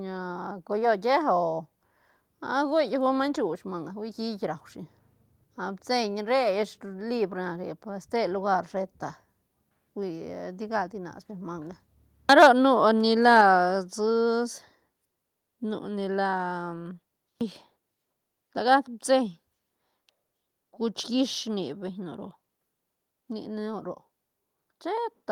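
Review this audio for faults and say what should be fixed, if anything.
Microphone overload at 12.29 to 12.47 s and again briefly at 13.4 s: the loudest speech peaks flatten against the converter's ceiling, by about 4 dB in the first burst and only just reaching it in the second, adding a harsh crackle. The likely cause is microphone input volume set too high. Lower the input gain so peaks stay several decibels below full scale.

Microphone volume stepped down at 13.41 s: immediately after the second clipped peak, voice and background both drop by about 3 dB in one abrupt step, as the call software likely reduces the device's input level in response to the distortion. Setting a sensible input level beforehand avoids this sudden correction.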